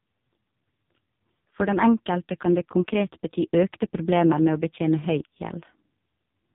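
Right through the speech you can hear the AMR narrowband mobile codec at work: nothing above 3.8 kHz, and heavy damage that sounds buzzy and synthetic, which points to roughly 5.15 kbps.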